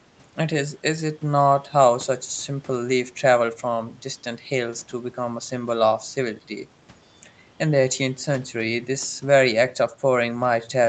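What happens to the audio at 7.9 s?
At 7.9 s the speech plays through intact, with no dropout, glitch or distortion, only the normal band limit of the call path, which stops at about 8 kHz.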